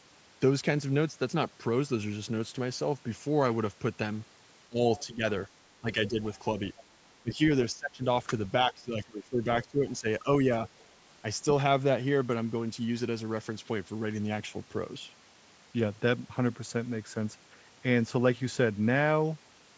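Speech suppressed in double talk comes first, from 4.69 to 5.23 s, when the talker's level dips by about 20 dB. The likely cause is an echo canceller that heard both sides at once and turned everything down. On the waveform the envelope pinches inward, and the spectrogram shows a faded band across the frequencies.

Inside that dip, from 4.98 to 5.04 s, the other side's voice leaks through as a brief scrap about 25 dB below the speech. This is likely residual loudspeaker echo that the canceller missed. It shows as a faint, narrow smear on the spectrogram.

Suppression returns at 5.8 to 6.2 s, about 15 dB deep. Another leaked scrap follows at 6.77 to 6.83 s.

Longer suppressed stretches run from 7.23 to 8.03 s (about 20 dB) and from 8.68 to 10.27 s (about 15 dB). In both, the speech sounds ducked in patches. A final, very faint leak at 10.8 to 10.86 s sits about 35 dB down.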